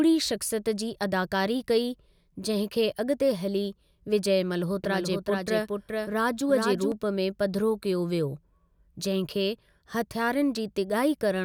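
From 4.84 to 6.92 s, just before "में पधिरो कयो", the speech carries a doubled audio track: a second, somewhat quieter full-band copy trails the original by roughly 400 ms. The copy has no decay or room colour and cuts in and out abruptly. This is likely a second capture through a slower path. On a spectrogram, each syllable's harmonic pattern repeats, shifted right by the same fixed gap. The waveform shows matching envelopes offset in time, with hard edges at both ends.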